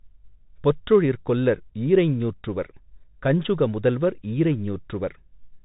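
From start to finish the speech carries the Bluetooth CVSD headset codec. Each sample is coded as a single up-or-down bit, consistent with a 64 kbps stream, and the step size keeps adapting, and nothing survives above 3.8 kHz. S sounds turn scratchy, loud bright moments smear as the steps fall behind, and a grainy hiss rides under the speech. That moving granular texture sets it apart from a clean telephone-band low-pass.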